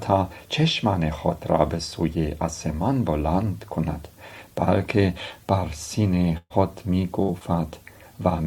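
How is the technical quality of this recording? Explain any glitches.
The recording has two dropouts near the end, both a burst of packet loss. At 6.37 to 6.53 s about 120 ms of audio is lost; at 7.22 to 7.42 s about 60 ms. The receiver extends the last sound, fading it, then resumes later. The first gap also includes about 40 ms of silence. On a spectrogram each shows a smeared, decaying band, then an abrupt jump; the waveform shows a tapering envelope.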